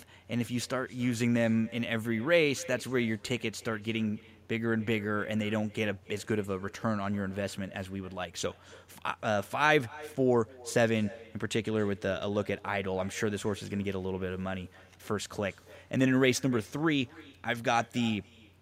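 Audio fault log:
Throughout: echo with no canceller. Every phrase of speech returns roughly a third of a second later as a fainter, thinner copy, sitting about 23 dB below the original. The far end is playing the call over a loudspeaker, and its microphone feeds that sound back across the network with nothing cancelling it. On a waveform, each burst of speech has a low trailing ghost offset by that delay; a spectrogram shows the same harmonic patterns repeated faintly to the right.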